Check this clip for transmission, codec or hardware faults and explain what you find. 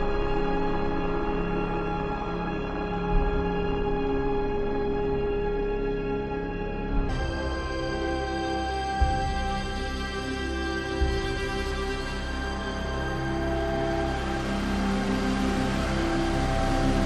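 One fault stands out: a section at the wrong speed. From 0 to 7.09 s the audio runs at 0.525 times its proper rate, likely because the player or editor clocked it against the wrong rate. Everything in that stretch sounds slowed, drawn out and about ten semitones lower, then snaps back to normal speed and pitch.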